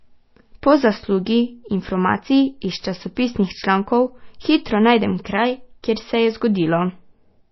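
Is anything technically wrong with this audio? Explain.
Yes. Throughout the speech, everything above 5.8 kHz is missing and the sound is plainly watery and swirly, likely from MP3 compression at a very low bitrate, fitting roughly 24 kbps. Starved of bits, the encoder cuts the treble and drops weak frequency lines frame to frame. A spectrogram shows a hard ceiling and flickering holes.

Pre-echo occurs at 5.83 s, between "člankov hitro najdem kraj" and "kjer se". An attack fell late in a transform block, so its quantisation noise spread about 13 ms ahead of it. You hear a brief hiss before a softened onset, seen as faint noise preceding the waveform's rise.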